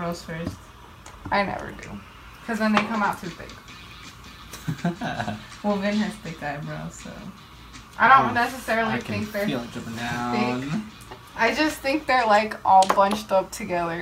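No technical faults can be heard anywhere in the recording. The audio runs without any break or sudden change at any point.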